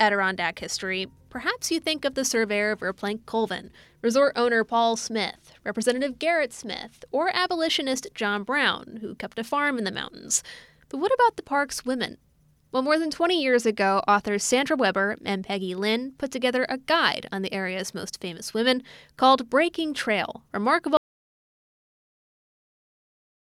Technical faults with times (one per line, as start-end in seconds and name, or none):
20.97-23.50 audio dropout to silence